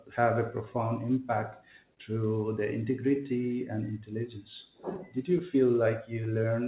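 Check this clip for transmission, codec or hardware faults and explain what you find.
Three related timing faults are present in this speech, carried over a G.711 A-law call path whose band stops at 4 kHz.

Clock drift between sender and receiver runs through the whole clip. The sender's clock is running roughly 2% slower than the receiver's, so the jitter buffer keeps draining. The receiver has to keep compensating, and this leaves small, unevenly spaced timing irregularities across the recording.

Repeated timing corrections span 0.21 to 6.15 s. To stay in step with the slow sender, the receiver repeatedly stretches short pieces of audio. These edits add around 70 ms in total and pull playback to about 99% speed. Each edit is small, and if heard at all, it comes across as a slight hiccup or an unsteady tempo.

A short stall from a late packet occurs from 1.94 to 1.99 s. A packet missed its deadline and the buffer ran dry, so the receiver held the last sound for 25 ms until the packet arrived. 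It then resumed from the same point with nothing lost, but playback delay rose by 25 ms. The sound is briefly sustained, with a slight buzz or dip.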